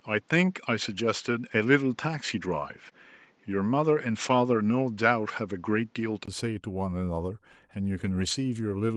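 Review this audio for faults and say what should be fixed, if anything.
Input switched to a poorer device, 0.0 to 6.28 s: the sound is duller and boxier, with nothing above 7.6 kHz, a new noise floor about 40 dB below the signal, and a level about 5 dB off. At 6.28 s a 20 ms silence marks the return to the fuller input, which likely means a device or headset-profile change. Pin the capture device and disable automatic switching to headset call profiles during recording.

Lost packet rebuilt from error correction at 0.91 to 0.93 s, 2.77 to 2.87 s, 3.89 to 3.91 s and 8.03 to 8.33 s: the decoder played low-bitrate copies carried in the following packets, so there are no gaps, but these stretches sound rougher and noisier. The first and third fit a single packet, and the last is the longest run. Reduce network loss or jitter on the sending link so that fewer packets need recovery.

Short concealed packet loss at 2.89 s: about 20 ms never arrived, just after the rebuilt stretch. 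The receiver extended the preceding sound for roughly 15 ms and blended back, leaving a brief smear. Improve the stability of the network path or increase jitter-buffer headroom so that late packets still arrive in time.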